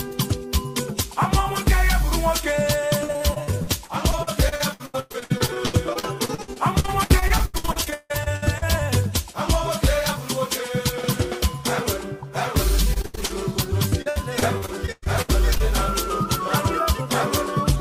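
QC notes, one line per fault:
3.03–8.64 s, repeated packet loss (robotic sound): dozens of short dropouts, up to 159 ms, each patched by stretching the previous sound, so about a third ends up choppy.
12.94–13.32 s, repeated packet loss (robotic sound): a brief burst where nearly half is filled in, gaps up to 78 ms, giving a quick choppy stutter.
13.90–15.68 s, repeated packet loss (robotic sound): another run of holes up to 108 ms; about a quarter is concealed by repeating the last sound, so it's choppy.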